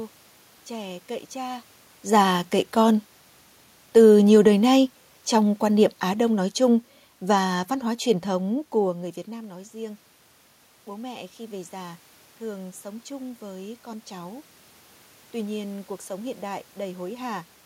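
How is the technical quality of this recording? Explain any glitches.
The recording has two gain-control problems: one stretch where the level sinks and one where it swells. In both, the room noise moves along with the voice. The talker's shifts in distance around 1.5 s and 8.5 s are separate and sound like natural movement.

Automatic gain falling, 4.36 to 7.71 s: the automatic gain control judged the incoming signal too loud and pulled its gain down gradually, by about 4 dB over roughly three seconds. You hear the voice and the background noise fade together rather than the talker getting softer. That shared drop is what marks it as the system turning itself down.

Automatic gain rising, 10.86 to 14.37 s: the input fell by about 16 dB, and the gain control responded by slowly raising its gain by about 5 dB across three and a half seconds. The voice swells back up, and the room noise rises with it. 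Because the correction is much smaller than the drop, the voice still ends up quieter than before.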